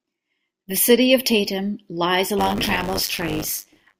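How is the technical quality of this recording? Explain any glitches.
The speech is marred by one fault. From 2.38 s to the end, buffer tearing: writer and hardware reader cross each period, splicing in a small slice of audio a few tens of milliseconds stale. The result is a steady 100 Hz robotic buzz over the speech.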